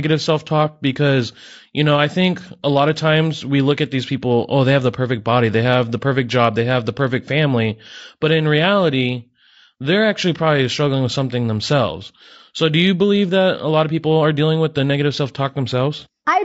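Throughout, the speech sounds rough and grainy, likely from low-delay AAC compression at around 32 kbps; a spectrogram shows smeared harmonics, noise filling the gaps, and a thin top band.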